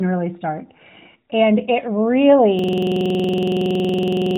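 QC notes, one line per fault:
2.59 s to the end, system hang loop: from here the audio locks into one short slice, about 46 ms long, repeated exactly dozens of times until the clip stops. It sounds like a rough, rattling buzz at roughly 21.5 Hz, the loop rate, rather than a clean stutter. The system stalled while the sound hardware kept replaying its ring buffer, and that slice length fits a 2048-sample buffer. The narrowband phone-line character, topping out near 3.8 kHz, carries straight into the loop.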